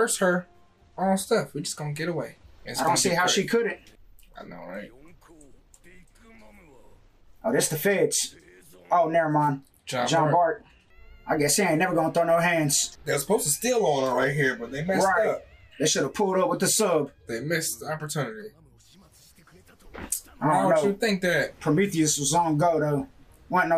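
No technical faults can be heard in this audio.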